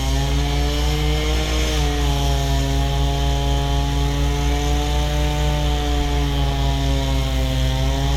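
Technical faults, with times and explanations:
Nothing in the recording stood out as a technical problem on listening.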